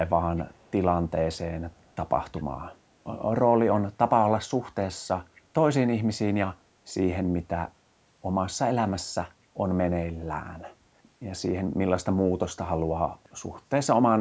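Echo leak at 0.36–0.71 s, 1.71–1.96 s, 2.36–2.41 s and 5.35–5.41 s: faint scraps of the speech return about 237 ms late, likely from a loudspeaker echo canceller failing to remove all of it.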